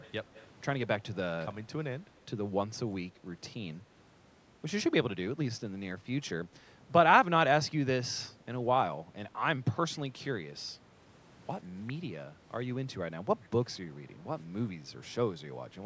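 From 0 to 0.12 s, 0.34 to 0.47 s and 9.95 to 9.99 s there's a faint delayed copy of the speech, trailing 124 ms behind and well below it. That's likely echo leak, with a loudspeaker's pickup slipping past an echo canceller.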